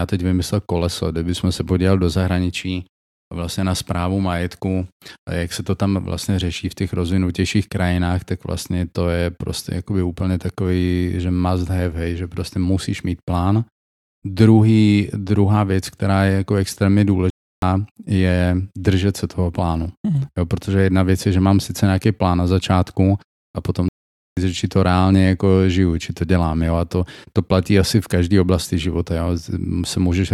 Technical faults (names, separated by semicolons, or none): playback stall